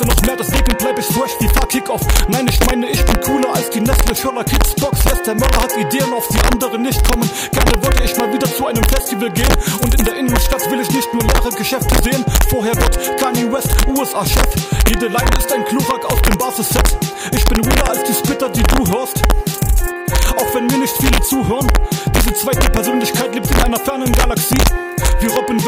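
Integer overflow runs through the whole clip. The signal is driven about 2 dB past full scale, and instead of being limited, every sample that exceeds the largest integer value wraps around to the opposite extreme. Only a small fraction of samples, well under one percent, cross that line, so the damage sits on the loudest peaks. Each one produces a sharp, violent crack, far harsher than ordinary clipping, because the waveform jumps across the full range rather than flattening.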